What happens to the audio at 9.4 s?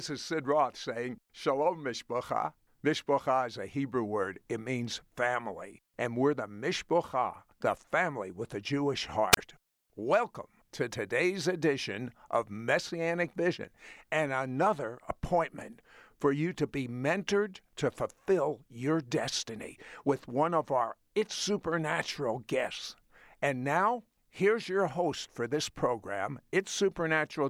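A wireless microphone squelch dropout occurs from 9.32 to 9.37 s, just before 9.4 s. The radio link from the analogue FM transmitter weakens until the receiver's squelch circuit decides the signal is too poor and mutes its output. The speech gives way to a quick swell of hiss or static, then a hole of near silence lasting about 30 ms, before the signal recovers and the speech comes back.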